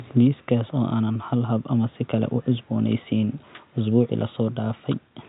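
Nothing technical goes wrong in this short bit of speech; the only other sound is the room's own quiet background noise, sitting about 44 dB below the talking.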